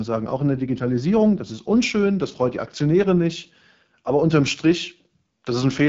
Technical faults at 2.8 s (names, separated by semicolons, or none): AMR wideband (HD Voice) codec